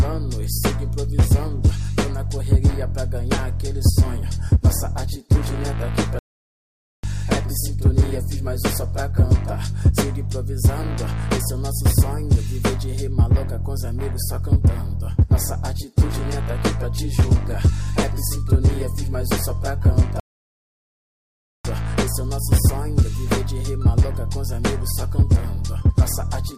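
At 6.19 s the audio cuts out for 0.85 s, until 7.04 s, and at 20.20 s it drops again for 1.45 s, until 21.65 s. Each is a playback stall, likely the player's buffer running dry or its thread blocking, leaving abrupt silence mid-flow.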